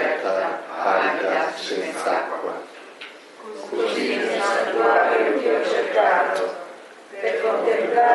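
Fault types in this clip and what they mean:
No technical faults can be heard anywhere in the audio.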